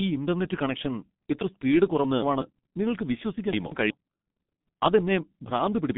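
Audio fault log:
throughout: G.723.1 codec. The speech went through a low-rate telephony coder at 6.3 kbit/s working in 30 ms frames, so the line band is held to roughly 150 Hz to 3.6 kHz with nothing above 3.8 kHz, and the slow model updates leave the voice heavily muffled and hoarse, with consonants smeared together.
2.04–2.42 s and 3.53–3.90 s: chunks out of order. At each spot a block of about 186 ms was written one block late, so it plays after the block that should follow it. The first comes right after "ഇന്റർനെറ്റ് കണക്ഷൻ ഇത്ര സ്പീഡ്" and just before "നിങ്ങൾക്ക് വിശ്വസിക്കാൻ", the second right after "നിങ്ങൾക്ക് വിശ്വസിക്കാൻ". Nothing is missing, but the syllables come out jumbled across the hard joins.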